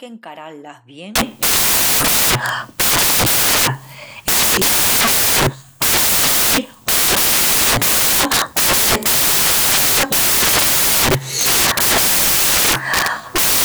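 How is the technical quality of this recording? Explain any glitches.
The technical quality is poor. From 1.16 s to the end, the recording collapses into loud, harsh broadband noise. This is samples built from the wrong bytes. The reader assembles each sample incorrectly, perhaps off by one byte or with the byte order swapped. The rapidly changing low bits end up as the large part of every value. The result is a harsh noise, close to white on the louder sounds.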